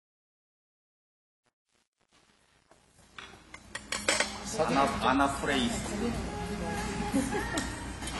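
Truncation distortion on a fade runs from 0.0 to 4.92 s, while the sound fades in. The fade stage kept too few bits and added no dither, so at the quietest levels the waveform collapses into a few coarse square steps. From 0.0 to 4.48 s the opening is gritty. The coarseness points to a word length of about 10 bits.

AAC compression is audible throughout the whole clip. The likely cause is AAC-LC coding at a low rate, which fits a bitrate of around 32 kbps. The encoder spends its few bits on what the hearing model ranks as most important. It drops the top band, so nothing is heard above 11.5 kHz. It also leaves gaps in the spectrum, making the sound dull and smeared, with a warbling, fizzy texture on sustained and hissy parts.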